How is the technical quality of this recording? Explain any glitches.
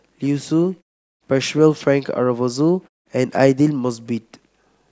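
Nothing in this speech recording stands out as a glitch, so there's nothing technical to flag here.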